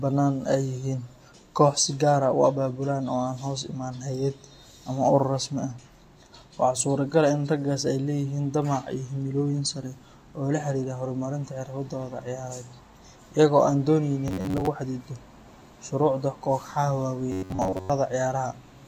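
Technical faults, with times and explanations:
14.28–14.67 s and 17.32–17.90 s, robotic sound from repeated short buffers: the speech turns into a stiff, metallic buzz pinned near 94 Hz, about half of the first stretch and most of the second. Audio likely arrived too slowly, so roughly 10.7 ms fragments were looped, fixing that pitch.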